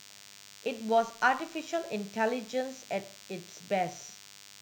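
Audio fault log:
throughout, DECT cordless phone buzz: a thin, steady, harmonic-rich buzz at 100 Hz sits about 20 dB below the speech. A nearby DECT handset or base transmits a brief radio burst every 10 ms, which the audio circuitry rectifies into this rasping tone.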